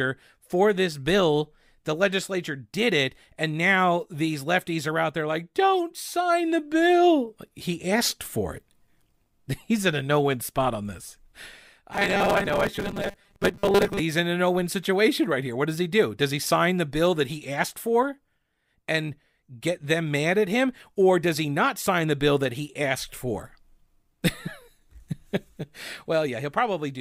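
Robotic sound from repeated short buffers runs from 11.93 to 14.00 s, ending just before "he's in a no". A rigid, metallic 200 Hz buzz sets in, likely because a 5 ms chunk was looped while roughly half the real audio was skipped.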